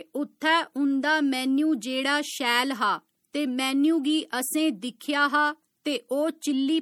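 All the way through, the audio has a watery, swirly quality, with sibilants that chirp and shimmer instead of hissing cleanly and consonant edges that sound smeared. That's plainly audible and most likely MP3 compression at a low bitrate, something like 64 kbps. The encoder runs short of bits, so quieter frequency detail flickers in and out between frames. Nothing reaches above about 20.9 kHz.

At 5.00 s there's a brief pre-echo, a hiss lasting about 11 ms that arrives just before a sharp attack and softens its onset. A transform codec spreads its quantisation noise evenly across a whole block. When a loud transient lands late in that block, the noise budgeted for the loud part also fills the quiet gap ahead of it, so you hear it as a hiss creeping in before the hit.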